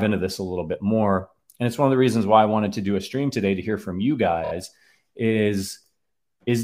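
At 4.43 s, just after "to hear from you", the clip shows repeated frames: a 26.1 ms block, consistent with a single compressed frame, plays three extra times through 4.51 s. This produces a short stutter and lengthens the audio by 78.4 ms.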